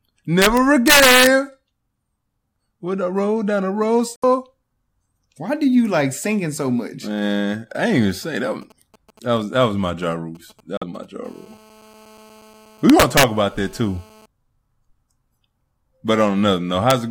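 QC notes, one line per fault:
0.42–1.27 s, 12.90–13.23 s and 16.90 s: integer overflow. Speech peaks pushed about 3 dB, 4 dB and 0 dB past full scale wrap to the opposite sign, giving violent cracks far sharper than clipping's flattened distortion.
4.16 s and 10.77 s: Bluetooth stall. Gaps of 65 ms and 44 ms of dead silence, likely the headphone buffer running dry, then the speech resumes.
8.23–11.05 s: GSM signalling bursts. A galloping dit-dit-dit of brief 217 Hz buzzes about 30 dB under the speech, intermittent grouped bursts, unlike a call's continuous buzz.
11.25–14.26 s: GSM phone buzz. A steady, raspy 217 Hz buzz rich in harmonics, about 30 dB below the speech and unrelated to it, which distinguishes it from mains hum at 50 or 60 Hz.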